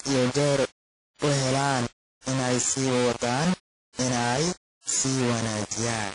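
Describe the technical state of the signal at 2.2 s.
Just before 2.21 s, a short burst of hiss runs up to the attack at 2.26 s, and the onset itself sounds softened and smeared. This is pre-echo, spreading about 56 ms ahead of the attack. The transform codec spreads its quantisation noise evenly across a whole block. When a sharp onset lands late in that block, noise sized for the loud part also fills the quiet stretch before it, so the hiss arrives ahead of the sound that caused it.

At the same moment the speech is gritty and coarse, with a hiss-like distortion that tracks the signal and sits only about 10 dB below it. This is low bit depth without dither. The sound points to samples rounded to as few as 3 bits with no dither added, which is the likely cause. Because the rounding error follows the signal, quiet parts break up rather than fading cleanly.

The audio here also has a washy, ringing quality, with hiss that breathes along with the speech, and nothing is heard above 10.1 kHz. 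This is WMA compression, and the damage is plainly audible. The sound fits a low bitrate, around 32 kbps, with an early WMA encoder as the likely cause. At that rate the codec discards weak spectral lines and cuts off the top band, and its long blocks smear quantisation noise over tens of milliseconds.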